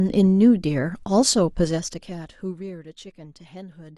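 Speech, with zipper noise from 1.47 to 2.76 s: a level drop of about 20 dB applied in unsmoothed steps, roughly 30 per second, producing audible ticking.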